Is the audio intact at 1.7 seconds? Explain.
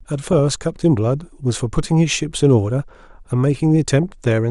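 No. At 1.7 seconds the speech carries the same damage heard across the whole clip. It sounds dull, with a gurgling, granular grit on the voice. This is likely MP2 compression. MPEG Layer II divides the sound into 32 equal sub-bands and shares out a fixed bit budget. Here the budget is tight, which fits a rate near 80 kbps. Upper bands drop out and flicker, and the remaining bands are coarsely quantised.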